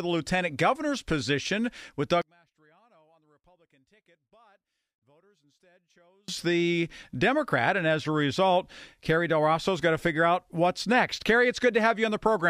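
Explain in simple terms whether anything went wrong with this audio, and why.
Right after "lieutenant governor's position with", from about 2.22 to 6.28 s, the speech nearly disappears and what's left sounds faint. That's likely one channel inverted: one side's signal is flipped, so when both sides are combined, the centred voice cancels itself out.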